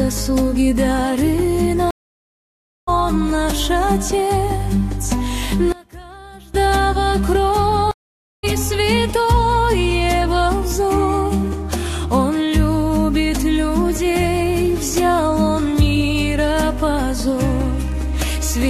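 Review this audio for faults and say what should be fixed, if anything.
Stream reconnect at 1.91–2.89 s and 7.91–8.45 s. Each time the connection drops, leaving about 0.97 s and then about 0.52 s of silence. A fresh decoder restarts mid-stream, so the audio resumes further along than where it stopped, skipping roughly a second the first time and roughly 0.4 s the second time. To prevent it, stabilise the network link and give the player enough buffering to ride out brief dropouts without tearing down the session.

One channel inverted, from 5.72 to 6.54 s. The sound collapses by about 22 dB and turns faint for that stretch. The likely cause is one stereo channel flipping polarity, so the material common to both sides cancels when they are summed to mono, leaving only the faint left-right difference. To prevent it, check the channel wiring and processing chain for a polarity flip, and monitor mono compatibility with a correlation meter.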